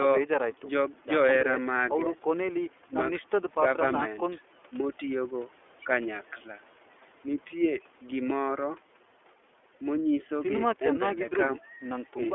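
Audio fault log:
throughout, iLBC codec: the speech sits in a narrow telephone band from about 300 Hz to 3.4 kHz, so it sounds thin and boxed-in, and the coding damage is plainly audible as a rough, slightly synthetic grain. iLBC codes the excitation of each 30 ms frame without relying on the previous frame, which points to its 13.33 kbps mode. That coarse, frame-by-frame modelling of the excitation gives the speech its rough, artificial edge.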